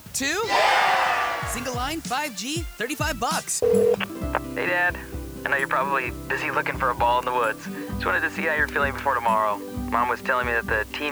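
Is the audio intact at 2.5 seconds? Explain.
No. At 2.5 seconds, as throughout the clip, a steady, even hiss sits only about 25 dB below the sound, with no distortion. This is low bit depth with dither, consistent with roughly 7-bit resolution: added dither turns the coarse rounding error into constant white noise.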